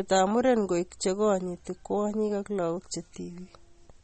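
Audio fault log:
Throughout: MP3 compression, likely at a low bitrate around 32 kbps, plainly audible as watery, swirly speech with nothing above 8.4 kHz. Starved of bits, the encoder drops weak frequency lines frame by frame, so a spectrogram shows flickering speckled gaps beneath a hard 8.4 kHz ceiling.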